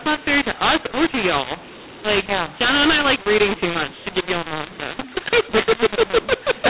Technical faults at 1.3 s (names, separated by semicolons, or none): mu-law and A-law mixed up